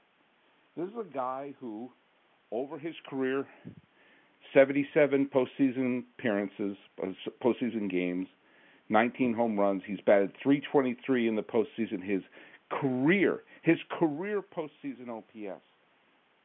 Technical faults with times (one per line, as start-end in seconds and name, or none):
none